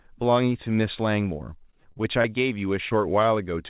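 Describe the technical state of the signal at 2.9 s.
At 2.89 to 2.93 s there is a short concealed packet loss: roughly 20 ms never arrived, so the decoder extended the preceding sound and crossfaded back, leaving a brief smear.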